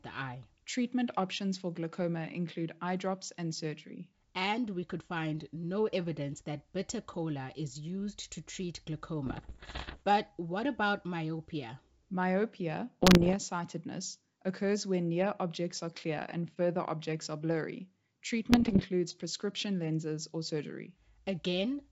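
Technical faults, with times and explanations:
9.26–10.04 s (after "is used to treat"), 13.03–13.35 s, 18.50–18.86 s (before "prescription lenses or"): bit errors on an ADPCM link. Flipped bits, about 1 to 2 percent, corrupt the G.722 decoder's step size and predictor, so each error rings on as pops and rough bursts with brief level jumps. These show as vertical broadband streaks and spiky, uneven waveform envelopes.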